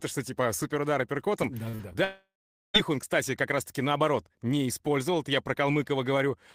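Just after "что типа суперудар апперкотом", short concealed packet loss smears the speech at 1.69–1.75, 1.75–1.81 and 1.93–1.96 s; each gap is bridged by continuing the sound, so it wobbles rather than goes quiet. From 2.04 to 2.76 s, a buzz continues the last sound, fades, then drops to roughly half a second of silence before "он кстати как". That points to a likely long network dropout, with the lost stretch never heard.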